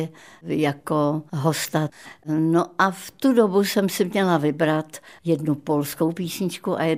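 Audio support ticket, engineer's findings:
No faults found in this speech clip; nothing to report against any component.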